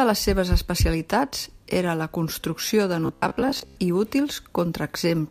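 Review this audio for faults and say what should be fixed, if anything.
Robotic sound from repeated short buffers runs from 3.06 to 3.76 s. Across that stretch the speech turns into a rigid, metallic buzz at about 66.7 Hz that still loosely tracks the words. That pitch corresponds to a 15 ms period, so the likely cause is audio arriving too late, with the playback side filling each gap by replaying the last 15 ms fragment. Roughly half of the original audio in that span is skipped in favour of repeats. To prevent it, enlarge or adapt the jitter buffer so that late packets are absorbed rather than papered over with looped fragments.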